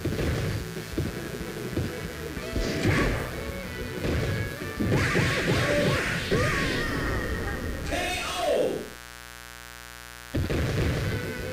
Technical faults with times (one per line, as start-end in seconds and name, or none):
0.00-11.53 mains buzz